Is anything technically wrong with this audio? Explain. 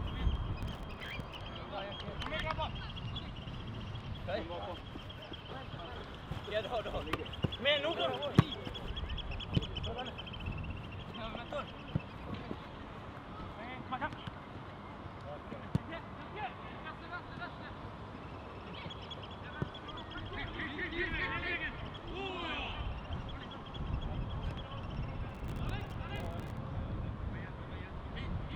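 Yes. Processor overload crackle appears from 0.62 to 1.35 s and from 25.29 to 26.57 s. Dozens of very short buffers, around a millisecond and a half each, miss their deadlines and drop to silence, producing gritty crackle. The waveform shows many hard-edged dropouts, and the spectrogram shows dense vertical broadband streaks.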